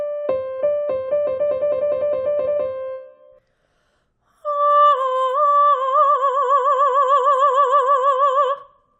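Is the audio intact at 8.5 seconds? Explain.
Yes, the audio at 8.5 seconds is intact, with no fault heard at that moment.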